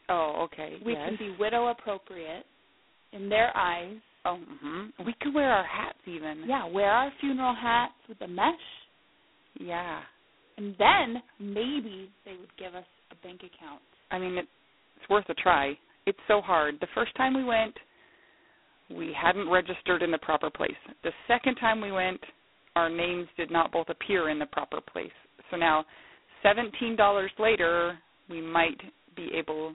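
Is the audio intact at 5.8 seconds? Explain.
No. G.726 ADPCM coding affects 5.8 s, as it does the whole clip: each sample is stored as a few bits of error from an adaptive prediction. The heavy, rasping hiss that tracks the speech level fits the 16 kbit/s mode, and nothing above 3.9 kHz survives.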